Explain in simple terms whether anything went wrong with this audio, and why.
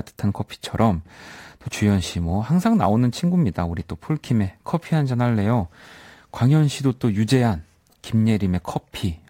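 Sample clock jitter runs through the whole clip: the recorder's timing wobbled by a few millionths of a second, adding a faint hiss that grows on loud, sharp speech sounds.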